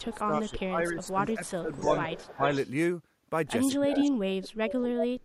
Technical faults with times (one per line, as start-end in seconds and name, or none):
0.00-1.89 speech suppressed in double talk
0.13-0.61 echo leak
1.02-1.34 echo leak
1.73-2.69 echo leak
2.36-2.52 speech suppressed in double talk
3.76-5.24 speech suppressed in double talk
3.89-4.10 echo leak
4.42-4.73 echo leak